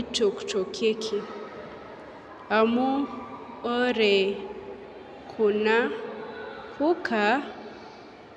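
A listen through this speech recording turns up nothing technically wrong at any point.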